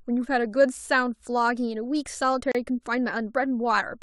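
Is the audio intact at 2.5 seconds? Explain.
No, there's a gap at a join of encoded pieces from 2.52 to 2.55 s. Untrimmed encoder padding leaves a 32 ms hole, and the speech resumes right where it stopped.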